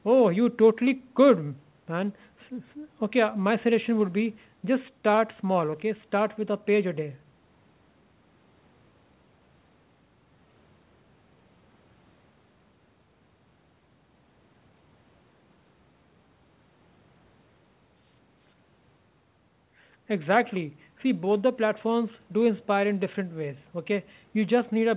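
No technical faults can be heard in the speech, which keeps the narrow, phone-like bandwidth of an ordinary call with nothing above about 4 kHz.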